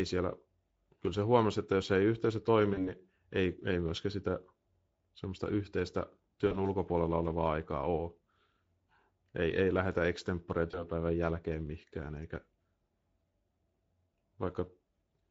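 The whole clip carries Speex codec damage, and it is plainly audible. The speech sounds hoarse and grainy. The excitation is starved of bits, which fits a middle Speex setting near 17 kbps.

VoIP packet loss concealed by the speech codec appears at 2.73–2.95 s, 6.47–6.67 s and 10.71–10.87 s. The first two gaps fit about 40 ms of lost audio, and the third about 20 ms. The decoder stretches its last sound into a sound that fades. Recovery lags afterwards.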